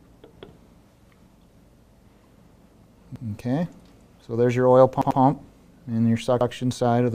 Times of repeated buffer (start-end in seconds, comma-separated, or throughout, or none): 0.65-0.74, 3.16-3.25, 5.02-5.20, 6.41-6.50